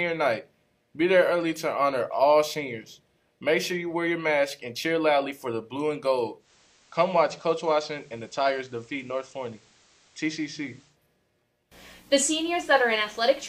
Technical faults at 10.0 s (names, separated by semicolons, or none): digital radio blending to analogue